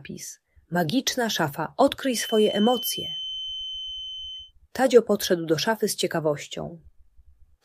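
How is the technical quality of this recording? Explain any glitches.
The recording has one glitch: a feedback whistle from about 2.04 s to 4.53 s. The likely cause is a loudspeaker-to-microphone loop held just at the edge of feedback, so a single frequency near 3.1 kHz keeps recirculating without building into a howl. It comes through as a thin, steady whistle roughly 10 dB below the main sound, swelling and fading slowly in level, before it drops out.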